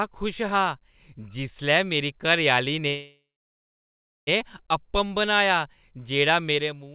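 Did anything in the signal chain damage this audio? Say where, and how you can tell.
Yes. At 2.88 s the speech stops and the receiver carries the last sound on as a decaying buzz or hiss, sinking to silence for roughly a second before the audio resumes at 4.29 s. This is a call audio freeze, likely a network stall that drained the jitter buffer. About 1.4 s was inserted rather than lost: the speech picks up exactly where it stopped and arrives that much later.

Truncation distortion on a fade sits at the tail. The fade-out begins around 6.5 s and runs from 6.50 s to 6.95 s. It turns gritty as the level approaches the smallest step, and it is at its worst from 6.92 s. That points to a digital gain stage that keeps only about 10 bits without dither, so the quietest part of the waveform collapses into a few coarse steps.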